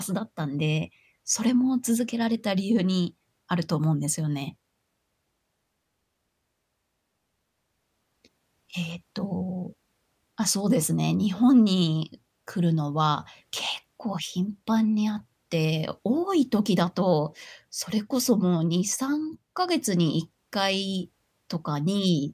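Nothing in this speech recording stands out as a technical fault, so there's really nothing to flag here.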